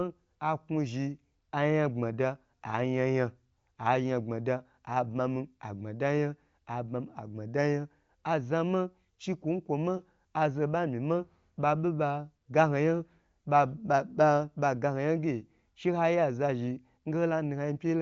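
The speech carries the band-limited character of the AMR wideband (HD Voice) codec, with nothing above 7.4 kHz and a clarity that fits its 23.05 kbit/s rate, and no technical fault can be heard anywhere in it.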